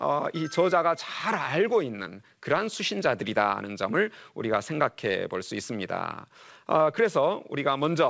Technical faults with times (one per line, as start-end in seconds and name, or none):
none